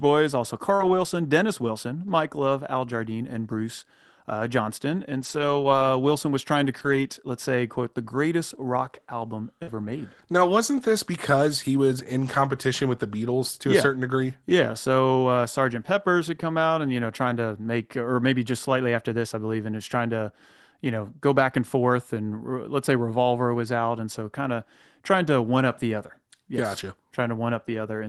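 At 0.75–0.81 s a brief smear marks a short concealed packet loss: about 40 ms of audio arrived too late, so the decoder stretched the preceding sound to cover the gap. From 0.79 to 1.05 s the sound turns rougher and grainier, a lost packet rebuilt from error correction. Here lost packets were replaced by low-bitrate copies carried in the following packets, so nothing drops out but the detail thins. The same coarse, noisy patch returns at 5.21–5.83 s, the longest stretch, and again at 6.79–6.97 s. At 9.63–9.69 s another concealed packet loss smears about 40 ms, followed by error-correction rebuilt audio through 9.67–9.97 s. Throughout, the Opus call path keeps content below roughly 12 kHz.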